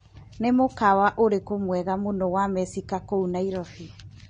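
Throughout, the encoder has had too few bits for each frame, which points to AAC compression at a low rate, likely AAC-LC, with damage that fits about 32 kbps. Nothing survives above 9.6 kHz, so the speech sounds dull and plainly smeared.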